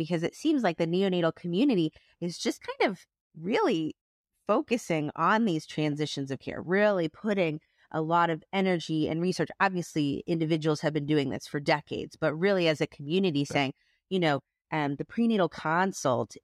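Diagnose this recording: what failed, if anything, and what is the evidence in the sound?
Nothing failed: listening across the whole speech recording, no stage from capture through to playback leaves any audible evidence of a fault.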